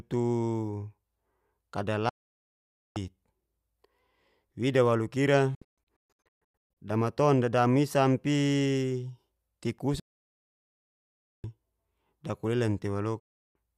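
At 2.09 s the speech cuts out to silence until 2.97 s: a digital broadcast dropout, where the receiver stopped getting clean frames and muted, with only a very fast 3 ms fade. From 5.55 to 6.77 s it breaks into several short holes, the longest about 0.13 s, as frames fail intermittently. Then there's a solid 1.44 s gap from 10.0 to 11.44 s and a brief one from 13.2 to 13.56 s. The gap lengths fit frames of about 32 ms, and whatever was sent during them is simply gone.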